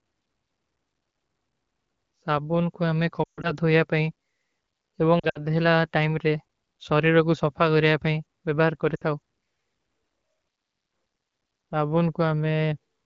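Lost AMR speech frames at 3.23–3.53 s (after "କୋ ହମେଂ"), 5.19–5.43 s and 8.95–9.03 s: smeared, fading sound where corrupted frames were concealed, visible as blurred, dimming harmonics and sagging waveform envelope.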